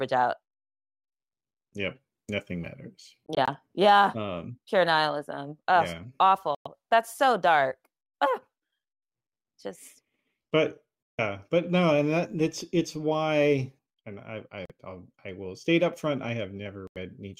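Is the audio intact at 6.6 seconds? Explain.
No. From 6.55 to 6.67 s the speech drops to silence for about 0.13 s with abrupt or briefly faded edges, a likely Bluetooth dropout where packets missed the headphones. Unlike a pause or stutter, speech resumes further along, as though it kept playing underneath.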